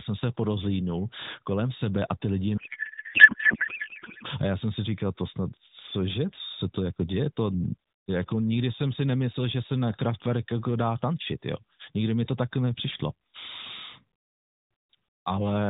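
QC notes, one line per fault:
2.58–4.26 s, codec payload misread: octet-aligned AMR frames decoded as bandwidth-efficient, so fields land wrong and the speech after "sebe a ty lidi" becomes garbled warbling noise.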